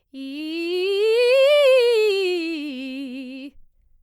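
No technical faults can be heard anywhere in this music clip. Nothing in it points to a problem in how the audio was captured, processed or delivered.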